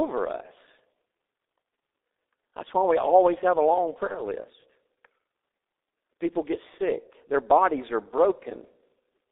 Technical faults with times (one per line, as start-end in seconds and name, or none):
0.00-9.32 G.723.1 codec
4.07-4.20 VoIP packet loss concealed by the speech codec